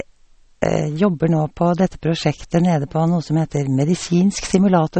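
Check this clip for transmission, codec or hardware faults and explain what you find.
One codec fault runs through the whole clip.

MP3 compression damage is plainly audible from start to end. The speech sounds watery and swirly, with chirpy sibilants and softened consonant attacks. This is likely a starved MP3 encoder, which fits a low bitrate around 32 kbps. It cut everything above 8.4 kHz and dropped weak frequency lines that flicker between frames. On a spectrogram this shows as a hard ceiling at 8.4 kHz and patchy, blocky holes below it.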